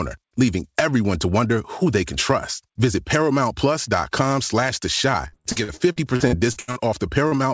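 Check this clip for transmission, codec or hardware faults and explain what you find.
Two packet-loss faults are audible in this speech, carried over a call link whose content stops at 8 kHz, which fits G.722.

Repeated packet loss (robotic sound), 5.28 to 6.79 s: packets kept going missing, and each gap, the longest 79 ms, was patched by extending the previous sound. About a third of the stretch is filled in, so it sounds choppy and robotic.

Short concealed packet loss, 7.28 to 7.34 s: about 40 ms never arrived in time and was bridged by continuing the preceding sound, heard as a brief smear.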